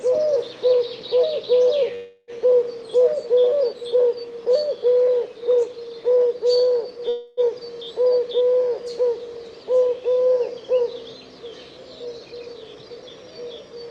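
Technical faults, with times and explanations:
1.95 to 2.31 s and 7.09 to 7.40 s, call audio freeze: the sound stalls and the last moment is stretched into a fading buzz, for about 325 ms and then 283 ms. Packets were likely held up and the jitter buffer ran dry. Playback then resumes where it stopped, with nothing lost.
12.05 to 13.90 s, jitter buffer speed-up: the sound runs about 13% fast while keeping its pitch, so it feels hurried. The receiver trimmed many tiny pitch-period slices, roughly 300 ms in total, to shrink a buffer that had grown too full.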